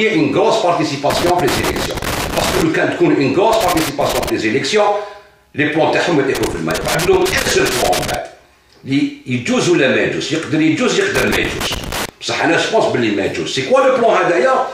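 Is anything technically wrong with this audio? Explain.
Yes. Loose connector crackle appears in four bursts: 1.1 to 2.62 s, 3.53 to 4.30 s, 6.35 to 8.15 s, and 11.15 to 12.09 s. A worn or dirty contact keeps breaking and remaking. This chops the signal irregularly. It is heard as scratchy crackle.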